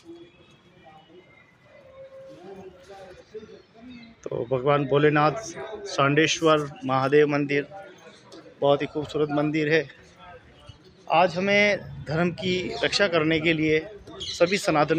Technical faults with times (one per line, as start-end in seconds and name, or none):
none